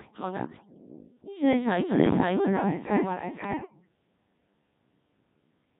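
Throughout the speech, the voice is not carried as a waveform at all: a Codec 2 vocoder sends only pitch, voicing, energy and a rough spectral envelope, and the decoder rebuilds the voice from sine waves. The damage is heavy, consistent with the very low 1.3 kbit/s mode. The result is a buzzy, robotic voice with a flat, synthetic tone. Anything beyond the single voice is mangled rather than reproduced.

Also present throughout is a doubled audio track. The whole speech is heard a second time, trailing about half a second behind and at roughly the same loudness as the original. The likely cause is a second capture over a slower path, or an edit that left two copies out of step. The echo carries no room decay or softening, so the two layers of robotic speech overlap.

From 3.44 to 3.88 s come bit errors on digital voice radio. Corrupted bits reached the vocoder at a rate of several percent, which points to about ten frames being damaged. 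In this codec each bit helps set a whole frame's pitch, level or spectrum, so a single wrong bit reshapes that frame. For under half a second the voice lurches in pitch and loudness, changes tone colour abruptly and breaks into warbles and bleeping gibberish.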